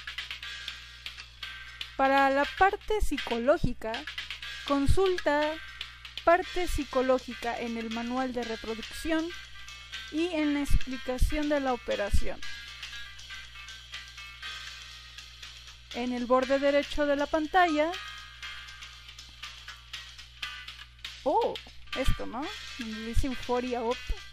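Nothing stood out as a technical problem on listening to this audio.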